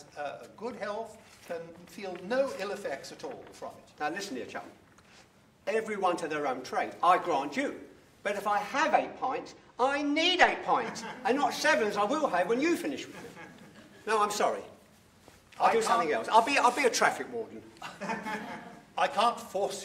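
From 8.73 to 10.87 s the audio loses brightness: a channel delay (comb filtering) fault, where one channel lags the other by roughly 0.04 ms, about two samples, before the two are summed to mono. At that tiny offset, cancellation only starts near 10 kHz, dulling the top. A spectrogram shows a dimmed band from about 10 kHz upward for that span; the waveform barely changes.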